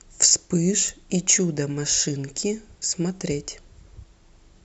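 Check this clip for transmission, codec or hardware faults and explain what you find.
Two brief faults turn up in the speech, at 0.89 s and 3.09 s, both dropped samples. The stream likely skipped a couple of samples, so the waveform jumps abruptly and produces a single sharp click each time.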